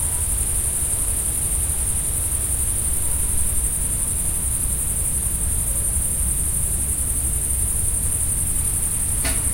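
Nothing in the recording stood out as a technical problem on listening.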